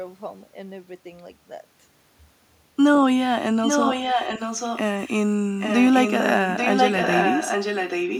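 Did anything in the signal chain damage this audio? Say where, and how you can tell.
Yes. The damage is an echo leak at the call-processing stage. From 3.63 to 4.79 s, and again from 5.59 s to the end, a delayed copy of the speech trails the original by about 836 ms, only around 5 dB below it. This is likely a far-end echo canceller that failed to remove its loudspeaker's output from its microphone feed, so the speech returned down the line as an audible second voice close to the original's level.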